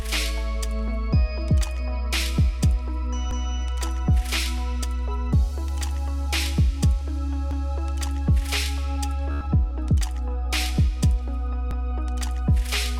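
At 3.31 s a short stretch of sound, 200 ms long, plays a second time, heard as a hiccup or stutter at the join. The same doubling returns at 7.51 s and again at 11.71 s, exactly 4.2 s apart. These are overlapping chunks: the audio was handled in blocks of 4.0 s, and each block was started 200 ms before the previous one had finished, so that overlap is replayed at every seam.

From 9.31 to 9.45 s the sound breaks into a rapid buzzing, machine-gun stutter, then picks up further along, as though it had kept playing underneath. This is Bluetooth stutter. About 98 ms of audio never arrived in time, which points to a short run of lost or late packets, and the receiver filled the gap by repeating its last small buffer over and over until fresh data came through.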